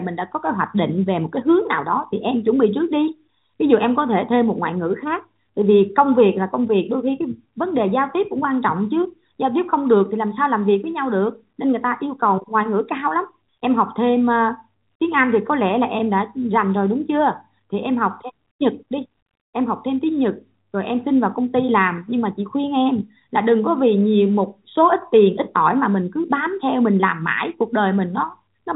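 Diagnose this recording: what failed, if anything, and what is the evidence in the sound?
Nothing failed here: the speech has passed through a normally working G.711 mu-law telephone path, which is why nothing is heard above about 3.8 kHz, and no fault can be heard at any stage of the chain.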